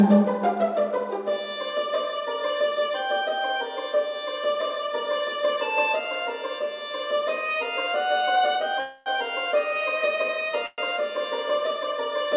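At 8.80 to 9.09 s and again at 10.66 to 10.81 s comes a call audio freeze: the last sound is stretched into a fading buzz, about 260 ms then 120 ms (the second ending in a brief silence), likely from packets stalling until the jitter buffer ran dry. Unlike a dropout, nothing is skipped; the audio resumes exactly where it halted, only later. The band stops at 4 kHz, which fits a G.711 call codec.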